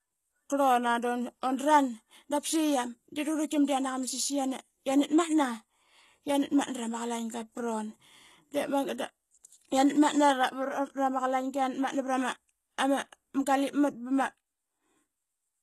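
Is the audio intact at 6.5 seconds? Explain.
No. At 6.5 s, as throughout, the speech carries likely HE-AAC compression damage. Its treble, rebuilt from copied lower bands, makes s sounds gritty and metallic, and the spectrogram shows a hard ceiling near 12.3 kHz, consistent with about 16 kbps.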